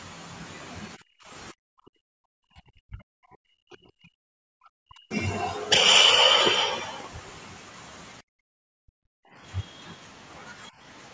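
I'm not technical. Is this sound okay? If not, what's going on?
No. Between 0.96 and 2.02 s, 2.35 and 4.35 s, and 4.78 and 5.11 s, the talker's voice sinks to almost nothing in patches, adding up to just over two seconds of lost speech. This is speech suppressed in double talk. Both sides were most likely talking at once, and the call's echo canceller, unable to tell the talker's voice apart from the other person coming out of the loudspeaker, turned everything down together.

From 8.23 to 9.36 s, the sound of the room around the talker drops away almost completely for about a second, then comes back. This is background gated by the echo canceller. The loudspeaker was playing the other side at that moment, and the canceller clamped the microphone down hard to keep that sound out. The room noise went with it until the canceller let go.

From 9.62 to 9.94 s, and again briefly at 10.66 to 10.70 s, a very faint second voice can be heard underneath, far quieter than the talker. 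This is the other side's voice leaking through. It most likely comes from the talker's own loudspeaker, picked up by the microphone and not fully removed by the echo canceller, so short scraps of the far end slip back into the recording.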